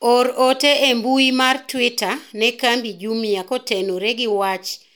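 Speech, with no technical fault to be heard. Nothing in the sound points to a problem anywhere in how it was captured or delivered.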